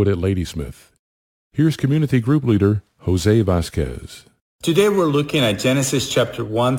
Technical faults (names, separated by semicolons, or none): crude rate conversion